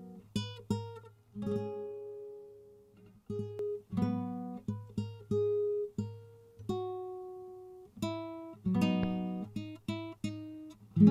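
From 1.04 to 3.59 s the sound is doubled, each part followed about 93 ms later by a same-level slap. This is channel delay (doubling): one channel runs late, which fits a 4096-sample buffer, and the two are summed to mono, so the late copy stands apart.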